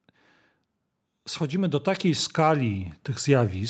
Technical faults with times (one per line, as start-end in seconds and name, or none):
1.50-3.70 automatic gain rising